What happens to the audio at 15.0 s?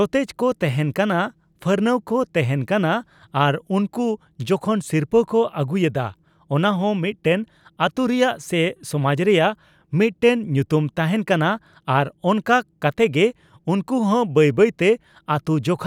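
At 15.0 s the audio carries on intact, with no dropout, click, glitch or other fault to be heard.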